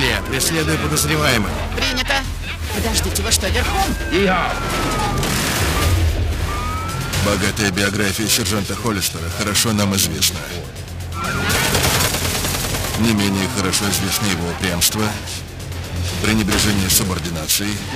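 Throughout, periodic clock jitter near 1 kHz puts sidebands that far either side of every component, showing as parallel spectrogram lines and sounding metallically rough.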